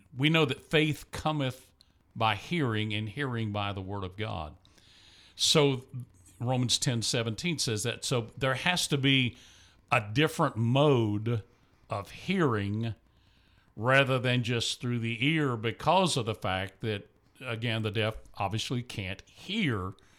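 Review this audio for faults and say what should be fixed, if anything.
Nothing to fix: no faults are audible anywhere in the speech recording.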